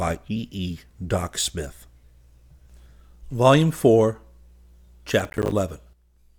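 From 5.20 to 5.52 s the speech breaks into processor overload crackle. Around fifteen buffers of roughly 10 ms each miss their deadline, and each one drops to silence with hard edges.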